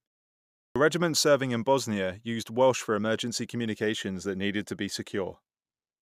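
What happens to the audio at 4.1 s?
Nothing goes wrong at 4.1 s; the speech carries on intact through that moment.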